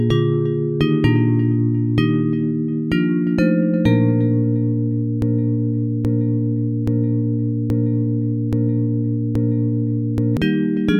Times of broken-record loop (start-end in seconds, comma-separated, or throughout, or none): 5.22-10.37